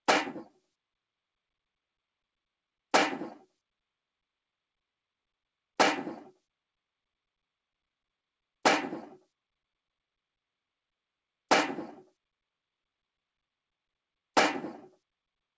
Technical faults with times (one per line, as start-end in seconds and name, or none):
0.40-0.60 sound cut by the noise suppressor